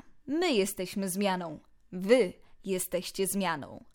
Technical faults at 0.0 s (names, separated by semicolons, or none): none